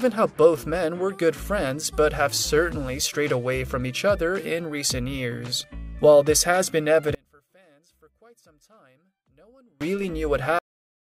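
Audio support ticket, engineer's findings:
One channel inverted, 7.15 to 9.81 s: level collapses by about 33 dB, centred content nearly gone, only a thin residue audible. Likely one stereo leg flipped in polarity, common signal cancelling on mono fold-down.

Cut-off end at 10.59 s: sound stops mid-event, hard drop to digital silence, no decay tail through end of file. Final buffers never written or played out; playback or capture terminated before flush.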